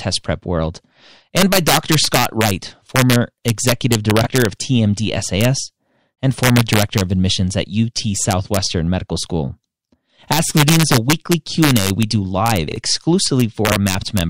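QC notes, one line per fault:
1.37–2.51 s, 2.96–4.45 s, 5.41–5.45 s, 6.43–7.01 s, 8.31–8.57 s, 10.32–12.03 s, 12.46–12.57 s, 13.40–14.21 s, integer overflow: loud peaks, up to about 3 dB over full scale, wrapped to the opposite sign instead of limiting, giving violent cracks far harsher than clipping.
4.21–4.27 s, frames out of order: two neighbouring decoder blocks of about 23 ms, consistent with single frames, were decoded swapped, so this instant flutters.
12.68–12.76 s and 13.68–13.76 s, chunks out of order: a 40 ms chunk played one chunk late, jumbling each moment briefly.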